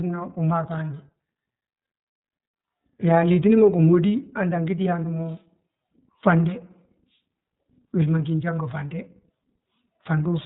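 iLBC codec damage runs throughout the speech. Each 30 ms frame's excitation is coded on its own, leaving a plainly audible rough, synthetic edge consistent with the 13.33 kbps mode. The narrowband coding removes everything above 4 kHz, so the voice sounds muffled.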